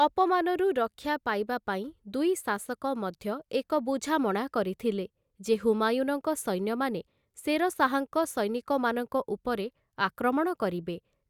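Nothing stood out as a technical fault on listening to this speech recording.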